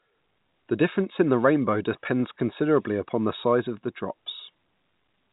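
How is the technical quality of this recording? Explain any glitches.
Nothing here needs explaining: the speech simply comes through an ordinary G.711 telephone channel, so it has that familiar phone-line band topping out around 4 kHz, and there are no glitches to point to.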